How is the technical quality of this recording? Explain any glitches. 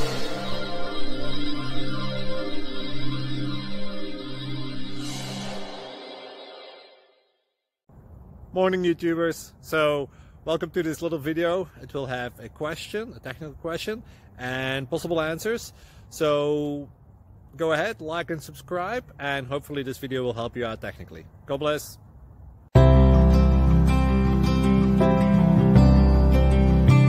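No glitches or technical faults are audible anywhere here.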